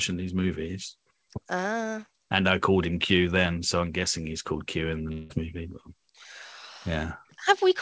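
From 5.12 to 5.33 s the speech turns into a fading buzz, likely a long network dropout; unlike a brief glitch, the lost 0.18 s never returns.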